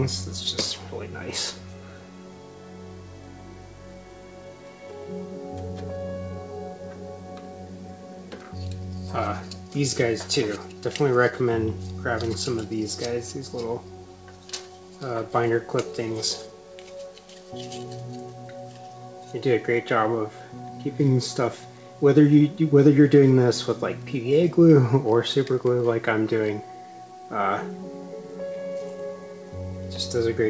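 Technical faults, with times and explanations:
No technical faults can be heard in the audio. It has passed through a working call path, and the sound stops at 8 kHz with nothing above it, which fits a wideband call codec such as G.722.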